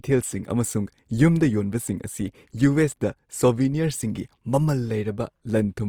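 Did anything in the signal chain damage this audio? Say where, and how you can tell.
Yes, at the codec stage: grainy, rough, noise-filled texture throughout the speech despite content reaching 20.4 kHz points to Opus compression, likely CELT-mode band filling near 24 kbps.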